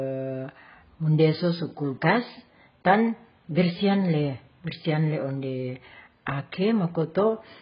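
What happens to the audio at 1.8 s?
At 1.8 s the speech carries AAC compression damage that runs through the whole clip. Nothing survives above about 5.1 kHz, so it sounds dull, smeared and warbly, most likely from AAC-LC coding at a bitrate near 12 kbps. A spectrogram shows a hard ceiling there with patchy, holed bands below.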